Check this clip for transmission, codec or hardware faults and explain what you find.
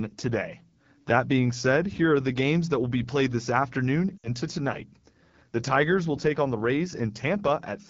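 Two faults are audible in this speech clip: the AMR wideband (HD Voice) codec at a low rate throughout, and lost AMR speech frames around 4.2 seconds.

The AMR wideband (HD Voice) codec damage runs through the whole clip. The speech has a rough, raspy edge, which fits one of the two lowest AMR-WB rates, near 8.85 kbit/s. At this rate the codec rebuilds the voice from a coarse pulse excitation driving a vocal tract model below 6.4 kHz, and it fills the band from 6.4 to 7 kHz with shaped noise. On a spectrogram, harmonics look smeared and grainy below 6.4 kHz, with a diffuse noise band above that and nothing beyond 7 kHz.

The lost AMR speech frames fall between 4.18 and 4.29 s, with about 60 ms of audio missing. Radio errors corrupted the frames, so the decoder rejected them and reused the last good pitch and vocal tract settings at falling gain. The result is a short, smeared warble that fades quickly toward silence, and the voice returns weak and rough for a moment. 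On the waveform the amplitude shrinks toward zero across the gap. A spectrogram shows frozen, flattened harmonics fading out before normal detail resumes.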